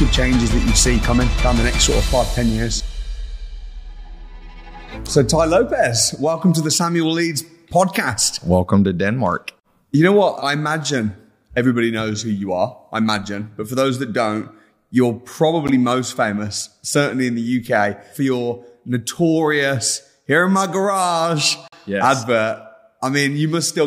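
At 15.68 s the sound drops out for about 13 ms, and at 21.68 to 21.73 s it drops out again for about 45 ms. Both are a gap between stream segments: the timestamps of adjacent segments don't meet, so the player inserts silence at the joins. The holes have abrupt edges and sit exactly 6 s apart, matching the segment length. Nothing is missing from the content; the added silence only delays what follows.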